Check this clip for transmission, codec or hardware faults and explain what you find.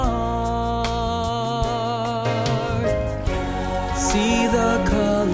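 No transmission, codec or hardware faults can be heard anywhere in the clip. There is nothing to report or explain.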